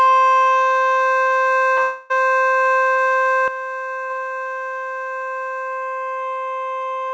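From 1.82 to 2.12 s the sound stops arriving for about 0.28 s. The gap is bridged by a continuation of the preceding sound that buzzes and thins rather than dropping to silence. When real audio resumes, that stretch is gone. This is likely a long network dropout.

At 2.94 to 2.98 s and again at 4.06 to 4.11 s there is short concealed packet loss. About 20 ms and then about 40 ms of audio failed to arrive, and the decoder extrapolated from the last sound. Each is heard as a brief smear before the real signal blends back in.

At 3.48 s the level falls abruptly by about 10 dB, sound and background together, and stays down to the end. This is a sudden gain jump, likely applied without a ramp. Across the clip, the call path carries nothing above 8 kHz.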